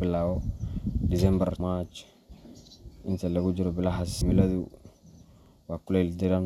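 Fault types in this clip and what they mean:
Compressed frames skipped: whole frames of the encoded stream were lost from the file or rejected as damaged by the decoder, so playback jumps straight past them. With frames of 26.1 ms, the speech lurches forward at 1.6 s by roughly 150 ms of audio and at 4.21 s by roughly 300 ms. Because adjacent frames overlap, each jump lands as a short smeared blip, not a sharp click, and a stretch of speech simply goes missing.
Overlapping chunks: the audio was handled in 3-second chunks, and each new chunk began slightly before the previous one ended, so the material at each boundary plays twice. Here about 48 ms repeats at each join, at 2.67 s and again at 5.46 s. The result is a brief stutter or click at the chunk boundaries, recurring at the 3-second spacing, as a small fragment of speech is heard a second time.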